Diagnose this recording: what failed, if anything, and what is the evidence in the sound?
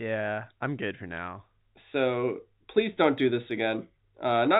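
Nothing stood out on listening to this telephone-band speech recording.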